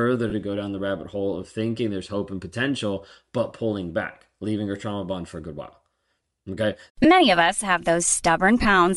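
From start to end the speech carries plainly audible codec damage: the upper spectrum sounds thin and grainy, with a breathy, noise-like edge on sibilants and vowels where detail has been replaced by filler noise. This points to Bluetooth LC3 compression as the likely cause, with the 10 ms transform framing of LE Audio and a data rate that fits roughly 48 kbps, low enough that much of the high band is coded as noise rather than signal.

Three short dropouts show lost LE Audio frames. The first runs from 0.30 to 0.33 s, just before "to go down the", with about 20 ms of missing audio, which fits two 10 ms frames. A single 10 ms gap falls at 7.04 s, just before "of us have", and another 20 ms loss sits at 8.63 to 8.65 s. In each, the decoder conceals the gap by repeating the previous spectrum with scrambled phase. The speech briefly turns into a rough, noisy smear instead of falling silent.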